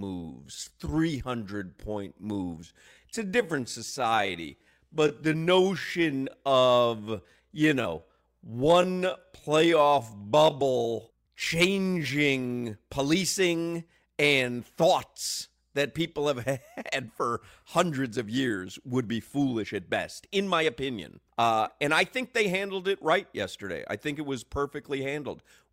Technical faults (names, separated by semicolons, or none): time-stretched section